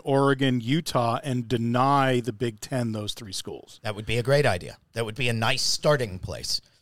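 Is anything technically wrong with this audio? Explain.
No, nothing in this speech recording points to a technical fault.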